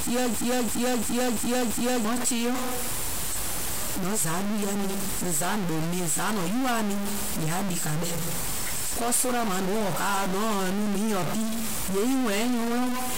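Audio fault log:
Throughout: stuck bit. There's a noisy distortion riding on all the speech, and the gaps between phrases never go quiet; they fill with a hiss-like noise of their own. The likely cause is a single data bit jammed at 0 or 1 in the converter path, so roughly half the samples land off by that bit's weight. Small signals keep flipping across it, which is why the pauses get noisy.
0.34 to 2.05 s: system hang loop. Right at the start, a chunk of about 341 ms repeats exactly five times, at just under 3 per second. That's the machine or driver freezing while the sound hardware kept cycling the same ring buffer, which fits a 16384-sample buffer. Since the loop stands in for fresh audio, about a second and a half of real speech is gone there.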